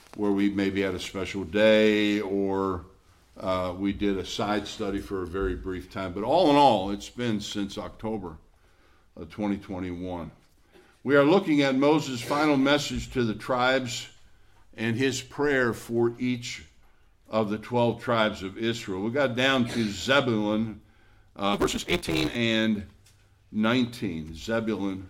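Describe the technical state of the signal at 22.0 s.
At 22.0 s the audio is inside a block size mismatch (truncated) running from 21.53 to 22.35 s. The tail of each block is discarded, which fits 256-sample reads. The sound buzzes at 172 Hz and plays 1.88 times fast at near-normal pitch. A spectrogram shows evenly spaced lines at 172 Hz multiples, and the waveform jumps every 5.8 ms.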